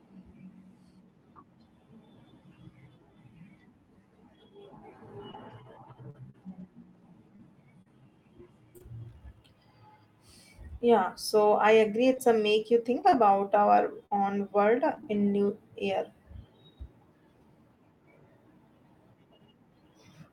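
Speech clip with scattered short gaps: lost or late packets were patched by extending preceding sound, leaving brief ticks and smears from 5.31 to 8.82 s and 12.14 to 15.19 s.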